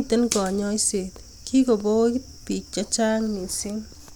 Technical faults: none

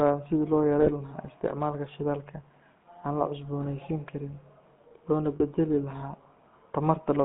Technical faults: GSM full-rate codec; lost GSM frames

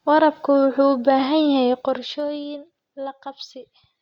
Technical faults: zipper noise

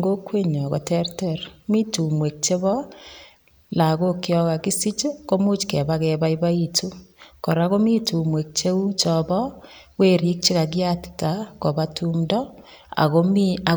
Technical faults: none

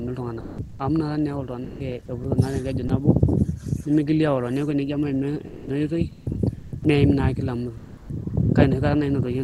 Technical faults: sound dropped by the voice detector; comfort noise in place of the background; sound chopped by the voice detector

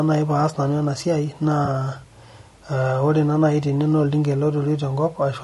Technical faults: low-delay AAC compression; AAC frame loss with concealment

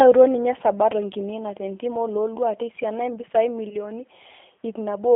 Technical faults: G.729 codec; VoIP packet loss concealed by the speech codec

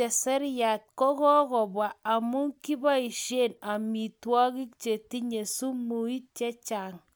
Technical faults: none

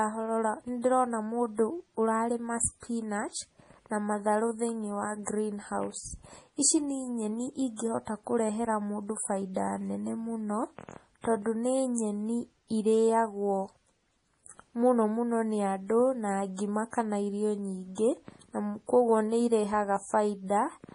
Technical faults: MP3 compression

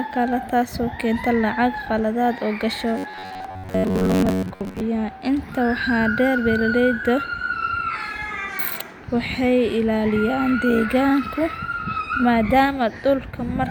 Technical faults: robotic sound from repeated short buffers

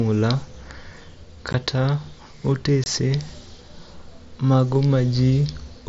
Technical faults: unconcealed Bluetooth headset packet loss

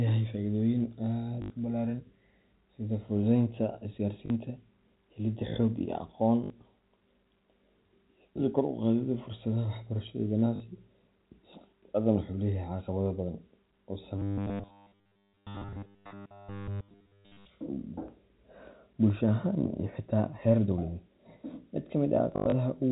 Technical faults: packet loss with last packet repeated; robotic sound from repeated short buffers

